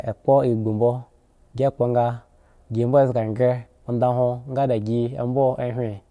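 There are no technical faults to describe in this speech, at any point in time.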